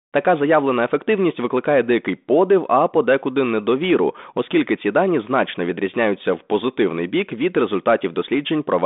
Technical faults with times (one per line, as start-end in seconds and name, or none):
none